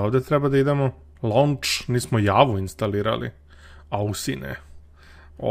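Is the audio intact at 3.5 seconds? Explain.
No, not quite. There's clock drift between sender and receiver: the sender's clock runs roughly 2% slow, so the receiver's buffer keeps draining and it has to stretch the audio to stay fed. You hear that as a slightly dragging, unsteady pace right through 3.5 s.

Those repeated timing corrections run from about 0.20 s to 5.10 s, with playback held near 98% speed and repeated slivers adding up to around a tenth of a second overall. Around 3.5 s they come across as small, uneven hiccups in timing.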